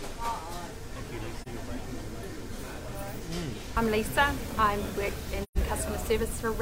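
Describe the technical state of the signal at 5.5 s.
At 5.5 s the signal sits inside an AAC frame loss with muting, running from about 5.43 to 5.57 s. Roughly 128 ms of coded audio is missing, which fits about three lost frames that the decoder replaced with silence by zeroing their spectrum. The overlapping transform windows fade the sound out and back in, so the gap has soft edges. That tapering sets it apart from a hard sample dropout, which cuts off abruptly, and from concealment, which would fill the hole with repeated or smeared sound instead of silence.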